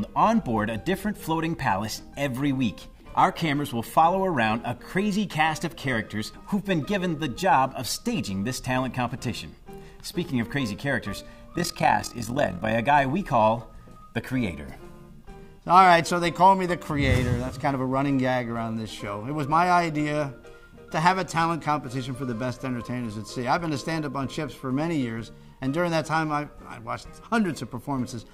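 The audio carries overlap-add ripple from 11.54 to 12.74 s. Its level rises and falls by about 11 dB, around 40 times a second. The frames were rejoined with overlapping windows whose gains do not sum evenly, so each frame leaves one dip.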